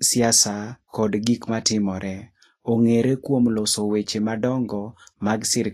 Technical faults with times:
0.00-5.73 Vorbis compression

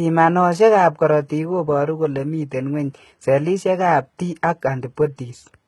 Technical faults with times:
0.00-5.67 HE-AAC compression

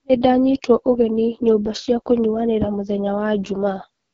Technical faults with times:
0.00-4.13 AMR wideband (HD Voice) codec

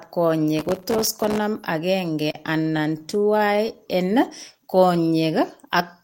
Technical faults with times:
0.59-1.38 processor overload crackle
2.15-3.71 repeated stalls (stutter)
3.76-4.81 jitter buffer slow-down

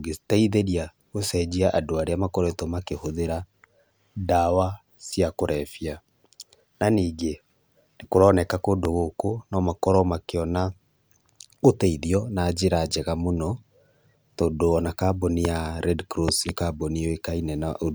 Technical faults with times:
8.85-8.87 loud pop
15.45-15.47 loud pop
16.28-16.51 loud pop

